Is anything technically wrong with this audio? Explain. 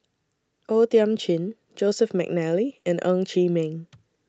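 Yes. At 2.79 to 2.85 s there is short concealed packet loss: about 40 ms of speech arrived too late, so the decoder extended the preceding sound and faded back in. Unlike a plain dropout, there is no silent hole, just a brief smeared, wobbling patch.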